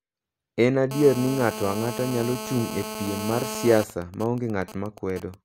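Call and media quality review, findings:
GSM phone buzz, 0.91–3.84 s: nearby 2G handset in an active call, its 217 Hz radio bursts rectified by the audio input. Steady, hard, raspy 217 Hz buzz with dense harmonics, about 9 dB below the speech.

GSM signalling bursts, 3.90–5.34 s: same handset, call continuing with its user silent, sending only sparse burst groups that the input circuit rectifies. Even ticks with a longer 217 Hz buzz twice a second, well below the speech level.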